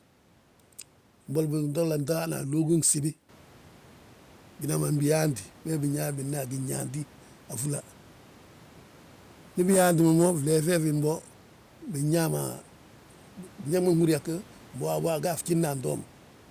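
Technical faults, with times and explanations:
No technical faults are present in this speech recording.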